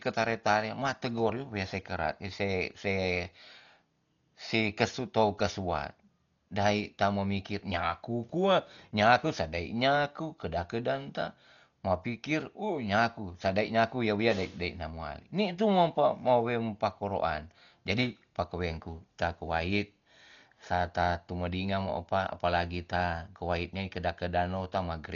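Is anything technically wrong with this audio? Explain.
Yes. Throughout the speech the sound is dull and muffled, with nothing above 7 kHz, and a rough, fluttering noise clings to the voiced tones. The likely cause is heavy Dolby Digital compression at a very low bitrate, which fits something near 40 kbps. Short of bits, the encoder cut the top of the band and left many frequency lines without mantissa detail, and the decoder filled those gaps with dither noise that produces the flutter.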